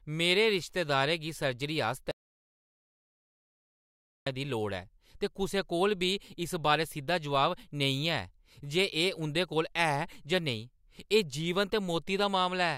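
From 2.11 s to 4.27 s, right after "रिश्तेदारै गी सर्जरी", the speech drops out to silence for about 2.15 s. The gap is silent with no room tone, and the speech then resumes mid-flow. The input was likely lost while recording continued, so that stretch is gone.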